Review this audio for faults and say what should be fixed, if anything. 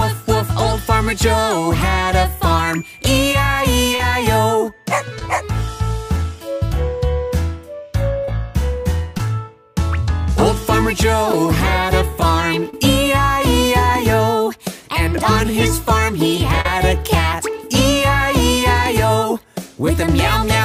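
Short concealed packet loss appears seven times: 3.95–4.00, 5.19–5.22, 8.25–8.28, 9.17–9.20, 11.32, 12.70–12.74 and 16.61–16.66 s. Each time, between 10 and 40 ms of audio arrived too late to decode, and the receiver bridged the gap by extending the preceding sound before crossfading back. Unlike a plain dropout, there is no silent hole, only a brief smear or wobble. Better jitter buffering and forward error correction on the network link would prevent it.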